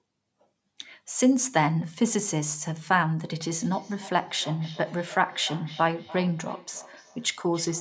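Speech clip with a feedback echo between two devices, from 3.57 s to the end. Each word returns at a fixed interval of roughly 300 ms, peaking about 18 dB below the speech. A second device in the room is replaying this microphone's signal, and the microphone picks it up again.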